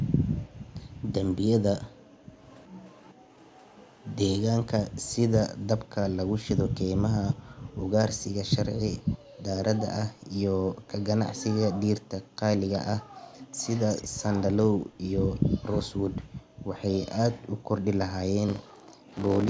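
From 0.45 to 3.26 s, the room tone behind the speech repeatedly dips and vanishes, dropping by as much as about 40 dB for around a second in total, then returning. This is background gated by the echo canceller. While the far end's audio played on the loudspeaker, the canceller clamped the microphone down hard and took the ambient sound with it. The same gating returns from 7.61 to 9.41 s (under half a second in all), from 12.24 to 13.14 s, and from 14.85 to 17.69 s (about half a second), each time reaching about 39 to 40 dB.

Overlapping the first gating, from 2.43 to 4.4 s, a faint delayed copy of the speech trails 368 ms behind, about 30 dB under the main level. It comes back louder, about 20 dB down, from 12.73 to 15.4 s and briefly from 19.11 to 19.34 s, always at the same 368 ms lag. This echo leak is likely residue that the far side's echo canceller failed to strip from its loudspeaker pickup and sent back down the line.

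From 18.48 s to the end, a steady robotic rattle at 50 Hz rides on the signal. This is buffer tearing. The writer and reader of the playback ring buffer have slipped against each other, so roughly two-fifths of each 20 ms period holds audio about 40 ms stale, hard-spliced in on both edges.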